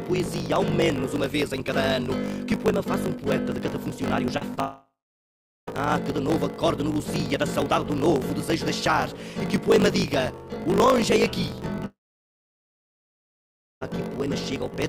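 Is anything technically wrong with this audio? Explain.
Yes. There are three kinds of fault.

A block size mismatch (truncated) runs through the whole clip. One stage writes longer blocks than the next reads, so the tail of each block is discarded. This fits 1024-sample blocks. It gives a steady 50 Hz buzz. The audio plays 1.16 times fast with its timbre kept.

Short concealed packet loss occurs at 4.37 s and 4.55 s. About 40 ms and 20 ms of audio never arrived in time. The receiver extended the preceding sound to cover each hole and then blended back. Each is heard as a brief smear or wobble.

Two long network dropouts are the likely cause of two longer breaks, from 4.60 to 5.69 s and from 11.85 to 13.83 s. The sound carries on as a fading buzz or hiss, then goes silent. The silence lasts about 0.9 s in the first break and about 2.2 s in the second. The audio then resumes with about 1.2 s and 2.3 s missing.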